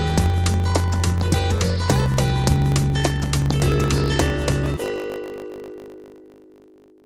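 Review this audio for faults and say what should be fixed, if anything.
A steady buzz at 50 Hz runs through the whole clip, and the sound plays about 1.07 times too fast while staying close to its normal pitch. This is a block size mismatch (truncated): one stage writes longer blocks than the next stage reads, which fits 1024-sample blocks being written, so the tail of every block is discarded. Fix it by making the writing and reading stages agree on one block size.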